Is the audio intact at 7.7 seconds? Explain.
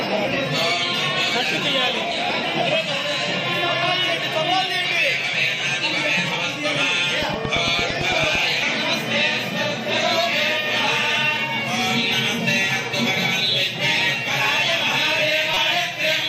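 No, 7.7 s falls within a train of clicks from 7.23 to 8.36 s: about ten similar pulses at a regular 8.9 per second, peaking about 10 dB above the sound, likely from interference or a faulty connection. The steady spacing and matching shape separate it from random crackle.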